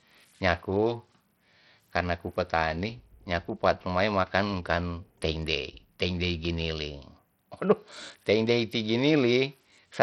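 From start to finish the speech carries heavy damage of the kind Bluetooth SBC compression leaves, likely from a low-bitrate SBC link, which fits a rate near 64 kbps. Nothing sounds above about 16.8 kHz. The coarse sub-band quantisation leaves the upper bands starved, so the sibilance flickers and thins, and a gritty, aliased roughness rides on the voice. A plain low-pass filter would sound dull but clean, with none of this grit.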